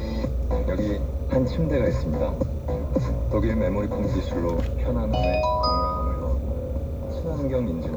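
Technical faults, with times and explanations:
Throughout, timecode bleed: a steady chirping warble sits behind the audio, roughly 35 dB below it. Linear timecode at 30 frames per second is leaking in from a neighbouring track or cable, its square wave flipping between tones near 1 and 2 kHz.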